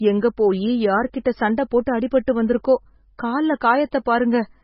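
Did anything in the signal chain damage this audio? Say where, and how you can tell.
Yes. MP3 compression at the codec stage runs throughout. Nothing reaches above 5.5 kHz, and the speech swirls watery and heavily damaged, likely from a starved bitrate around 16 kbps.

Pre-echo from the same codec occurs at 1.24 s, right after "எங்க போயி". A short 11 ms hiss precedes an attack, because block-wide quantisation noise spills into the quiet moment before it.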